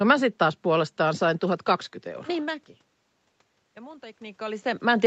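From 3.75 to 4.73 s, automatic gain rising can be heard. Just before, around 4 s, the speech drops sharply in level, by about 24 dB at the input, as the talker moves away. The gain control then climbs by about 4 dB over roughly a second. What separates this from the talker simply returning is that the room noise swells together with the voice, because the whole signal is being amplified rather than the source coming closer.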